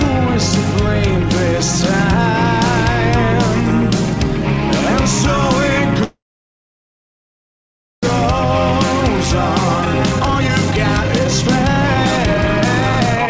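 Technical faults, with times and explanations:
6.04–8.05 s, call audio freeze: the sound stops and the last fragment trails off as a brief decaying buzz or hiss, then about 1.87 s of near silence, roughly 2 s in all. This is likely a stall in packet delivery that drained the jitter buffer. When packets resumed, the audio continued from exactly where it halted, so nothing is lost. Instead, a 2 s gap is inserted and everything after it runs that much later.
9.75–13.29 s, jitter buffer speed-up: the audio plays at about 141% of normal rate with its pitch unchanged, so it sounds rushed through to the end of the clip. The buffer held more audio than it aims for, and the receiver worked it off by repeatedly cutting out short pitch-period-length pieces. Together these remove roughly one and a half seconds, bringing playback delay back toward its target.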